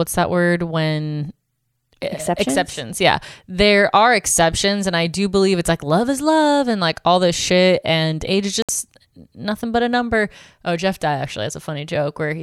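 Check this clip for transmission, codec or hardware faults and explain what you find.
One fault stands out: a digital broadcast dropout at 8.62 to 8.69 s. The speech snaps to silence for roughly 65 ms, a short clean hole rather than a crackle, then resumes mid-flow with whatever was said in that gap missing. The receiver lost the signal or rejected corrupted frames and muted its output until valid data returned. A gap of that length fits two consecutive lost frames, and nothing was concealed or repeated to fill it.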